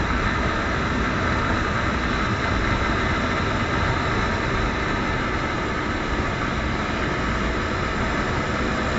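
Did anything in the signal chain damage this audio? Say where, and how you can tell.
No, there is no audible damage from any stage of the signal chain here, with nothing to place at a converter, buffer, format conversion, processing, transmission, storage or playback step.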